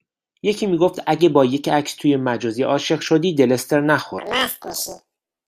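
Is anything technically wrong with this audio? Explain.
Yes. From 4.18 s to the end of the clip at 5.48 s, the speech has planar audio read as interleaved. The stereo data is stored in blocks, with a full run of left samples followed by a full run of right samples, but it is being read as alternating left-right pairs. Each 24 ms block therefore plays twice at double speed, left half then right half. This lifts the speech an octave, 12 semitones, and adds a rough flutter repeating at about 41.7 Hz.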